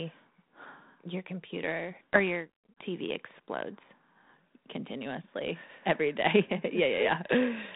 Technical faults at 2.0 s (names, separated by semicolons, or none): loudspeaker feedback squeal